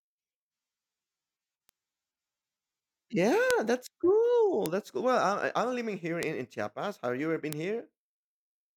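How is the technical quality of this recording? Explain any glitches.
The speech is marred by five bit error spikes, at 1.69, 3.51, 4.66, 6.23 (just after "I'm living here") and 7.53 s (just after "you ever been"). Single flipped bits on a digital path jump one to three samples by a power of two, peaking around -30, -12 or -6 dBFS. Each is a sharp broadband tick unrelated to the speech.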